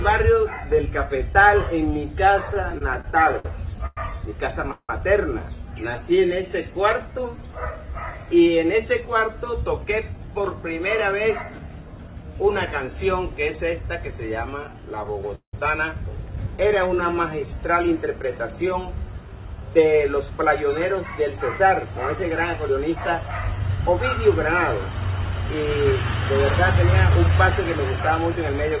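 Audio carried over a call path, band-limited with nothing above 4 kHz, consistent with G.711 A-law, shows repeated jitter-buffer trouble. Repeated stalls (stutter) occur from 2.54 to 4.90 s, with 13 stalls totalling 459 ms, about 19% of that span, the longest 176 ms, and from 15.04 to 15.54 s, with 4 stalls totalling 208 ms, 41% of the span, the longest 178 ms. Each time the buffer ran dry, the receiver extended the last sound until packets resumed, so nothing is lost but the flow drags and judders. A jitter buffer slow-down runs from 5.96 to 7.77 s, adding 179 ms, and from 16.48 to 17.47 s, adding 108 ms, both at 90% speed. Repeated pitch periods rebuild the buffer's reserve, so the audio stretches out at unchanged pitch. A jitter buffer speed-up runs from 9.65 to 12.24 s at 109% speed, dropping about a fifth of a second, and from 19.12 s to the end at 104%, dropping around 0.4 s. Short pitch-period slices are cut to shed excess buffered delay, so the audio runs faster while the pitch holds steady.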